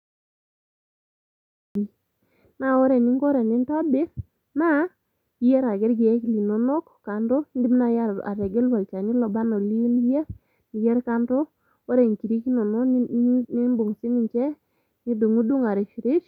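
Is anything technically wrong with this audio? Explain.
Yes. There is a cut-off start: capture or streaming only began partway into the speech. From 0.0 to 1.75 s the file holds digital silence, and at 1.75 s the audio begins abruptly in the middle of a sound. Because recording started after the talking was already under way, that sound has no natural onset or fade-in. It simply switches on, with whatever came before it missing.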